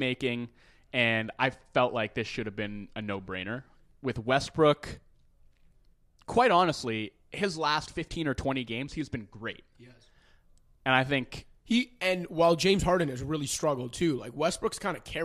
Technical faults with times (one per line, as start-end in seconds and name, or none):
none